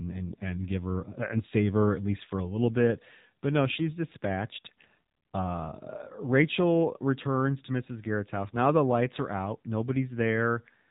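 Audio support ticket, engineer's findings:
AMR narrowband mobile codec, whole clip: band-limited below 4 kHz, buzzy, synthetic speech; fits a low AMR-NB mode around 7.4 kbps, too few pulses per subframe to model the voice cleanly.

AMR bit errors, 8.48–8.59 s: brief hoarse, gargly scratch, pitch and level roughly held; fits about five frames with a few percent of weakly protected bits flipped, misplacing excitation pulses.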